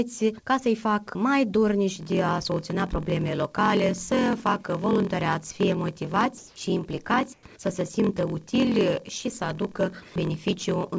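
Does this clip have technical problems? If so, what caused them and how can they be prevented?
Yes. From 1.94 s to the end there is a block size mismatch (padded): a steady buzz at 43.1 Hz and audio running at 0.938 times normal speed with timbre unchanged. This fits a stage writing shorter blocks than the 1024-sample blocks the next stage reads, with each shortfall zero-filled. The unchanged timbre distinguishes it from a sample-rate error. Matching the write and read block sizes, or buffering to an exact block, prevents it.

At 6.38–6.56 s (180 ms) and 7.34–7.43 s (90 ms), the quiet background becomes a flat, featureless hiss. It is about 4 dB louder in the first stretch and about 6 dB quieter in the second. This is likely comfort noise in place of the background, filling pauses while transmission halts. Smooth synthetic noise distinguishes it from dropouts, which go silent, and from packet-loss concealment, which repeats sound. 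Disabling discontinuous transmission on the sender prevents it.

The call path's G.722 coding leaves nothing above 8 kHz.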